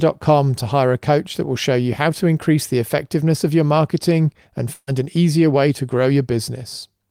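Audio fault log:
4.73–4.89 s, burst of packet loss: after "of your marketing and", 140 ms of speech never arrives. The receiver repeats the last sound for 137 ms, fading it out, with 30 ms of silence in the gap, before playback resumes at "an easier way to".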